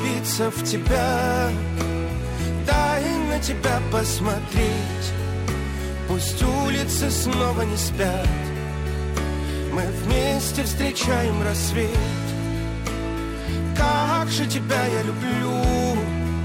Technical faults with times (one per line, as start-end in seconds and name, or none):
0.00-16.44 crude rate conversion